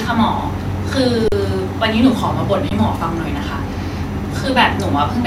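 Speech, with two short underruns with held sample: at 1.28 to 1.32 s the waveform freezes flat for 40 ms, and again for a brief flat spot at 2.69 s. The output buffer ran dry and the converter held its last value, so sound just stops, and roughly that much live audio was dropped.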